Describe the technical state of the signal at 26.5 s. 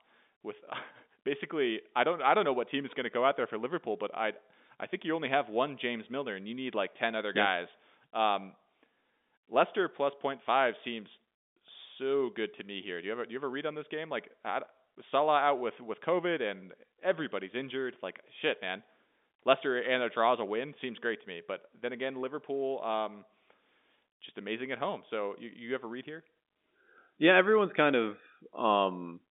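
At 26.5 s the speech is intact, carried in the narrow telephone band of G.711 coding with nothing there beyond what that line path normally imposes.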